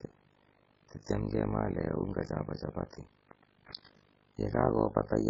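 From start to finish the speech has a hollow, watery quality, with s sounds breaking into metallic chirps and consonant onsets smeared. Nothing survives above a fixed treble cutoff. On a spectrogram this shows as a flat ceiling, with sparse patches of energy blinking on and off below it from frame to frame. The cause is likely MP3 compression at a very low bitrate, around 16 kbps, where the encoder cuts the treble and drops weaker frequency lines it cannot afford to code.

Running through the whole clip as well is overlap-add ripple. The sound was split into windowed frames and rebuilt with overlaps that do not add up to a steady gain, so the level dips and recovers once per frame, roughly 50 times a second, with swings of about 60 dB. The voice takes on a fast flutter, a rough tremolo. A waveform shows the envelope chopped into regular scallops, and a spectrogram shows evenly spaced vertical stripes.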